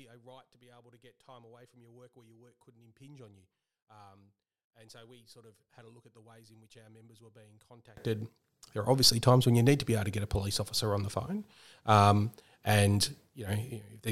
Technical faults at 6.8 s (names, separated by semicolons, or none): one channel inverted